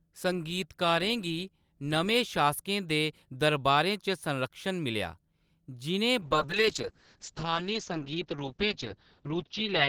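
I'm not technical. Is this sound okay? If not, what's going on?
No. From about 6.2 s to the end, the speech turns muffled and rough, as if heard through a wall. This is a call bitrate drop: the connection had less room, so the call squeezed the sound into far less data, keeping only sounds below about 6 kHz and coding those more coarsely. Unlike dropouts from lost data, nothing cuts out. The speech stays continuous, just duller and grainier, and it doesn't return to full clarity before the clip ends.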